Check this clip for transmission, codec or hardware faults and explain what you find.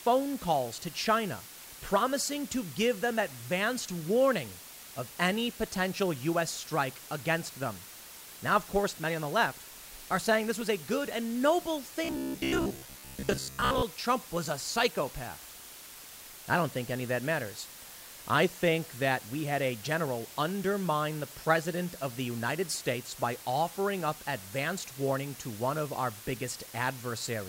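Two faults are audible: a constant hiss across the whole recording and a short robotic stretch in the middle of the speech.

Low bit depth with dither runs throughout, from start to end. The signal has been reduced to very few levels, which fits roughly 6 bits, and random dither was added before rounding. The dither turns what would be harsh quantisation distortion into steady, featureless white noise. The result is an even hiss sitting only about 15 dB below the speech, loud enough to be heard under every phrase and in every pause, with no grit or distortion of its own.

Robotic sound from repeated short buffers occurs from 12.04 to 13.83 s. Here the speech collapses into a rigid, metallic buzz at 66.8 Hz that still loosely tracks the syllables. A cycle of that rate lasts about 15 ms, so the buzz fits one short block of audio played over and over. The likely cause is audio arriving too seldom, with the playback filling the gaps by looping the last block while most of the real speech in that stretch is skipped.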